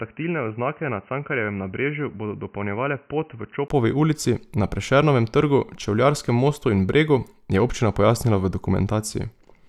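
From the start to 3.70 s, the speech is dull and boxy. Nothing above 3 kHz is present, and the level sits roughly 10 dB lower. A faint background noise runs underneath, far below the voice. At 3.70 s a brief gap of about 20 ms occurs, and the sound opens up and gets louder just before "ulici na". This points to an input switched to a poorer device. The likely cause is a narrowband microphone or headset call profile.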